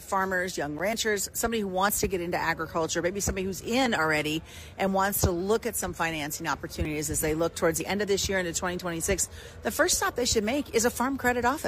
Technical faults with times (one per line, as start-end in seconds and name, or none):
0.79 block of digital silence
1.89-1.91 overlap between stream segments
3.86-3.90 overlap between stream segments
6.85-6.88 overlap between stream segments
7.80-7.83 overlap between stream segments